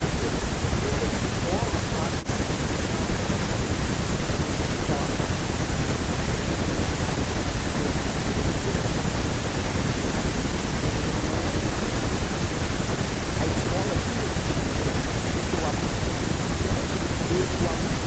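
At 5.71 to 5.73 s a skip ahead drops roughly 1.5 s of speech. Playback jumps straight forward, and both sides join with no gap.

Jitter buffer speed-up follows, from 11.62 to 13.65 s and 14.78 to 16.19 s. Trimmed pitch periods make speech run 3 to 4% faster, same pitch.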